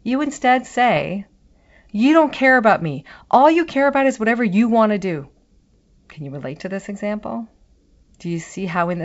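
Just after "you instead", from 0.96 to 1.03 s, bit errors on an ADPCM link produce a rough crackling burst with brief level jumps, about a third of a percent of bits flipped. Each corrupted bit knocks the decoder's step size and predictor off track, so the disturbance rings on for several milliseconds through the G.722 path.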